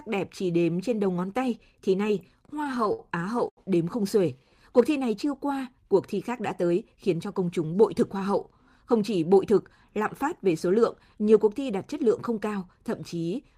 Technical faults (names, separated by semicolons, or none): repeated stalls (stutter); short stall from a late packet; jitter buffer speed-up